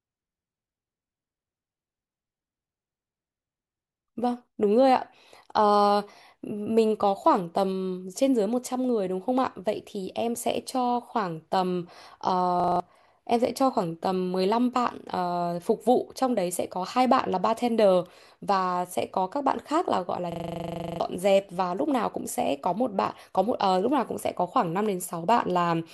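At 12.6 to 12.8 s and again at 20.32 to 21.0 s, a system hang loop repeats one 40 ms buffer, producing a steady 25 Hz buzz that drops roughly 0.2 s and 0.7 s of speech.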